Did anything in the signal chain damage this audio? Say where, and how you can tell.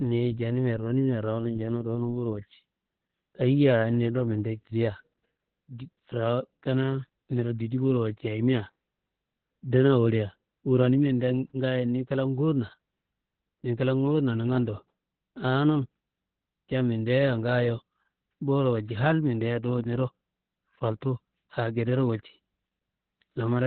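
Yes. The damage is at the codec stage, with Opus voice compression running throughout. Nothing above about 4.5 kHz survives, and the speech sounds muffled, hoarse and slightly robotic. That fits narrowband SILK coding at a very low bitrate, around 8 kbps, where the excitation is coded coarsely.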